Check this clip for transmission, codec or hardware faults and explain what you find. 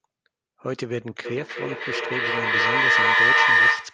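One transmission fault stands out: feedback howl. From 1.25 s to the end of the clip, a shrill tone near 2 kHz swells to about 12 dB above the speech and pulses roughly every third of a second. Two devices in one room are sharing the call, so each pass from loudspeaker back into microphone adds gain. The repeats therefore build rather than decay and narrow onto the frequency the loop favours. The audio also passed through a call codec, which caps the top end around 12 kHz.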